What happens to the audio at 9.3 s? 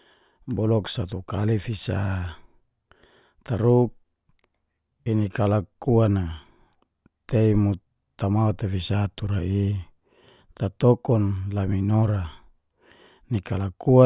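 Nothing goes wrong at 9.3 s; the speech continues intact through that moment with no audible fault.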